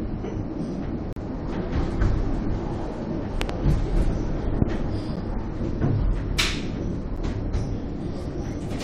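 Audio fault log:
1.13 to 1.16 s, 5.16 s and 7.17 s: gap between stream segments. The sound drops into hard-edged silence, about 37 ms at 1.13 s and about 10 ms at the other two, where the timing of one 2-second segment leaves a hole before the next and the player fills it with nothing. The sound resumes exactly where it stopped, with nothing missing, and the holes fall on the 2-second segment grid. Unlike a pop, nothing is added; the sound is briefly absent.
3.42 to 3.52 s and 4.62 to 4.64 s: loud pop. A double pop spans the first range and a single pop the second, each peaking at about 20 dB above the surrounding sound, which carries on underneath. A sudden voltage step, likely from a plug, switch, static discharge or driver glitch, is shaped by the following circuitry into a sharp thump. Unlike a segment gap, energy is added on top of the sound rather than removed.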